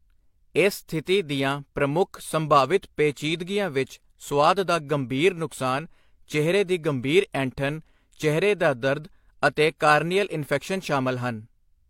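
No technical faults can be heard anywhere in this speech.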